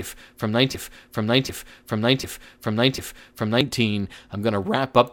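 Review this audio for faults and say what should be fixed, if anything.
From 0.75 to 3.61 s a 0.75 s piece repeats four times back to back, a broken-record loop likely from a stalled stream resending its last fragment. To prevent it, the player should fall back to silence rather than replay held data when fresh audio stops arriving.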